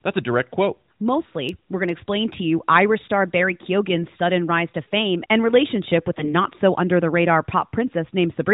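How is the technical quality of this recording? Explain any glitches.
The recording carries narrowband mobile-codec audio, with nothing above 4 kHz and light coding texture consistent with AMR-NB at about 12.2 kbps. It has one glitch.

From 6.16 to 6.35 s, between "fame and relationship with" and "so under the radar", AMR bit errors occur. Across a stretch that fits about seven 20 ms frames, roughly one bit in twenty of the weakly protected frame data was corrupted. The integrity check still passed, so the decoder used misplaced excitation pulses and wrong gain and spectral values. Pitch and loudness hold roughly steady, but the sound turns hoarse and gargly. On a spectrogram the harmonic stripes smear into ragged, noisy texture for that 0.18 s. The waveform envelope stays similar but grows jagged and irregular.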